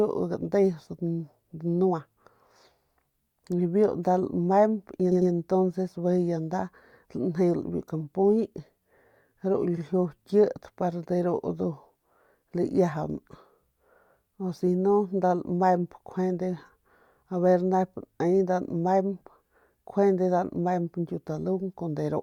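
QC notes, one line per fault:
5.11 to 5.31 s, repeated frames: a 100 ms stretch of speech plays twice more in a row, a stutter that adds 200 ms.
9.77 to 9.83 s, repeated frames: a 60 ms block plays once more, adding 60 ms. Unlike a dropout, nothing is lost; unlike an echo, the repeat is an identical copy at full level.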